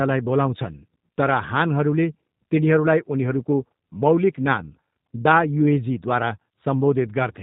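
From start to finish the speech has passed through a G.729 codec, and the damage is plainly audible. The model rebuilds each 10 ms frame from a vocal tract filter, a pitch predictor and a few pulses, which gives the speech a rough, synthetic edge. Nothing above 4 kHz survives, consistent with an 8 kbit/s G.729A stream.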